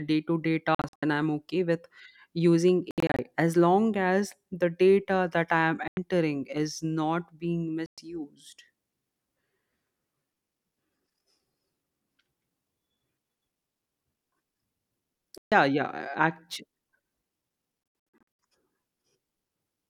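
Bluetooth dropouts cut the speech at 0.75 to 1.03 s, 2.91 to 3.19 s, 5.88 s, 7.86 s, 15.38 s and 18.20 s. Late packets were likely dropped. Each gap falls silent, then the speech resumes further on.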